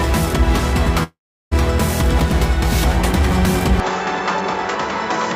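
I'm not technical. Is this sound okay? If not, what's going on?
No. From 1.03 to 1.53 s there is likely a long network dropout: the connection stopped delivering sound, so the player stretched the last bit into a fading buzz or hiss and then went silent. About half a second was lost, and the sound resumes past that point.

From 3.8 s to the end, the likely cause is an input switched to a poorer device, a different microphone or headset taking over with no pause. It can't carry the highest tones, nothing above 7.6 kHz, so the sound turns duller, a bit quieter, with new background noise underneath.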